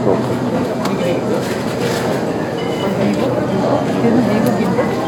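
No technical faults can be heard in this recording of sounds. Nothing in it needs a timestamp or a note on how the signal was handled.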